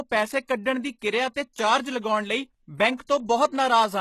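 A speech recording that was likely passed through HE-AAC compression at a low bitrate, around 16 kbps by the sound, leaving gritty, synthetic-sounding treble and nothing above 12.3 kHz. Pre-echo from the codec's block-spread quantisation noise puts a brief hiss just before sharp attacks, at 0.48 s and from 2.97 to 3.00 s and 3.07 to 3.09 s.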